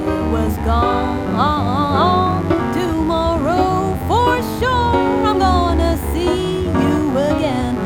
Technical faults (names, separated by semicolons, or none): mains buzz